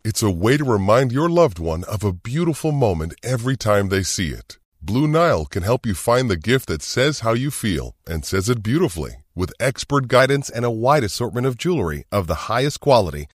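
From 0 to 10.19 s, a wrong sample rate: the audio plays slower than it was captured, with no conversion, which fits 48 kHz material run at 44.1 kHz. Speech runs at 0.919 times speed and 1.47 semitones low, until "and a wide assortment".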